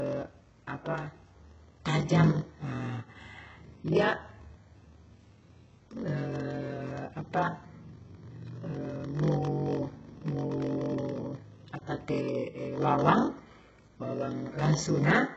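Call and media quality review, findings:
Block size mismatch (padded), whole clip, 0 to 15 s: steady buzz at 46.9 Hz. Playback runs slow at 0.938x with pitch roughly normal. Short zero-filled gaps end each block, consistent with a 1024-sample read block fed by a shorter writer. Waveform: flat dropouts repeating every ~21 ms. Spectrogram: evenly spaced vertical stripes with harmonics of 46.9 Hz. Component: buffer handoff between pipeline stages.

HE-AAC compression, whole clip: heavy codec damage on speech. Sibilants sound gritty, metallic and lispy, with no content above 7.9 kHz. Likely cause is HE-AAC at a very low bitrate, around 8 kbps, where replicated treble misaligns harmonics across the crossover. Spectrogram: hard ceiling at 7.9 kHz and a repeated, smeared upper band copying the lower band's texture. Component: encoder.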